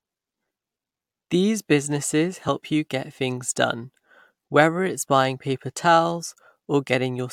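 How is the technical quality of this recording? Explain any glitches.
There is one glitch: a tiny skip at 2.48 s in the speech, where the waveform jumps abruptly instead of continuing smoothly. It comes from an overlap between stream segments. The timing is consistent with a boundary between segments of about 2 seconds. The time stamps of two adjacent segments overlapped, and the player trimmed the overlap as if it were duplicate material. That discarded roughly 10 ms of real audio, producing a tiny skip and a discontinuity in the waveform.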